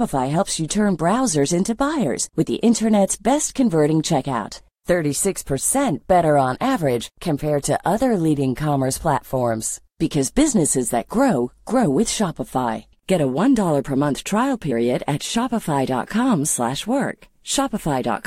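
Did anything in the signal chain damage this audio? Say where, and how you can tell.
Yes, at the codec stage. Compressed frames skipped at 14.70 to 14.72 s. About two frames, roughly 50 ms, are missing, so the audio jumps ahead by that amount.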